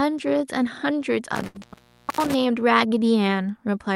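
Speech, with a cluster of faults between 1.36 and 2.34 s. An intermittent contact opens the line across that span, in all for about 588 ms: a loose cable or plug breaks the signal, so the sound drops out with crackle at each break and only faint hiss remains while the circuit is open. Inside that span, at 1.47 to 1.57 s, there is a short stall from a late packet. The receiver ran its jitter buffer dry and held the last sound for 74 ms until the packet turned up, then carried on without losing anything, adding 74 ms of delay. A short concealed packet loss follows at 1.59 to 1.63 s. About 60 ms of audio never arrived, and 26 ms of synthesised continuation patches the gap, heard as a brief smear, while the delay drops back by around 30 ms. Last, a jitter buffer slow-down from 1.68 to 1.86 s repeats tiny segments to rebuild its reserve, adding 36 ms and playing at 84% speed at unchanged pitch, so the sound is drawn out.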